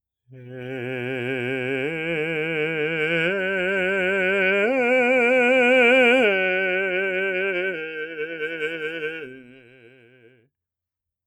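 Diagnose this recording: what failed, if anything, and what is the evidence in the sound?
A speech noise suppressor was left on through the whole piece, a call-processing fault. Sustained tones and reverb tails are treated as noise, so level swings by around 15 dB while attacks pass, giving an audible pumping and thinning of held material.

Between 7.72 and 10.5 s the noise suppressor cuts a sound harder than the rest, with a deepest drop of about 21 dB across roughly three seconds. The steady, decaying part sinks and its tail is truncated, consistent with the suppressor classifying it as background.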